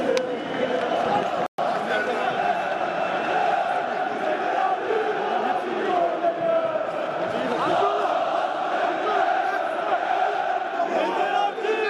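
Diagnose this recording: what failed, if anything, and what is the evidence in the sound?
Playback failed briefly. At 1.46 s the sound cuts out mid-flow and stays silent for about 120 ms, until 1.58 s. Then it resumes. This is a playback stall. The gap is clean silence, not noise or distortion. The output simply had nothing to play. The likely cause is the player running short of data or its thread being blocked. Once it recovered, output picked up again. The fault sits at the playback stage.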